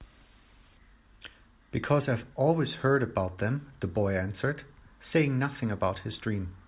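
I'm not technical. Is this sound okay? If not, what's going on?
Yes, it's fine, and there's nothing here that needs fixing.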